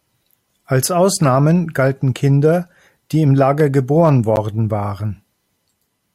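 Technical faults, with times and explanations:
4.36 s, block of digital silence: about 11.5 ms of samples drop abruptly to silence and return without any fade, so the speech carries a tick or dip.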